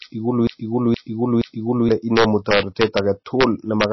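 From the very start until 1.89 s, the same 0.47 s fragment of speech repeats back to back three times, stuttering like a stuck needle. This broken-record loop is likely a stalled player or stream resending its last buffered piece, so the speech meant for that stretch is lost.

Throughout, the loudest peaks break into violent, sharp cracks, harsher than ordinary clipping. This is integer overflow: the signal was driven about 3 dB past the integer limit, and the few samples over it, around half a percent, wrapped to the opposite extreme instead of being held at the ceiling.

Also throughout, the speech sounds watery and swirly, with nothing above 5.8 kHz and smeared consonant onsets. The likely cause is heavy MP3 compression at a starved bitrate, fitting roughly 24 kbps, which cut the treble and switched weak frequency components on and off between frames.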